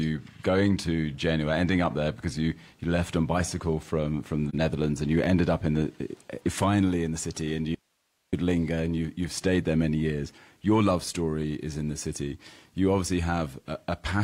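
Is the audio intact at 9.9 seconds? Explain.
Yes, the audio is intact at 9.9 seconds, with no fault present at that moment.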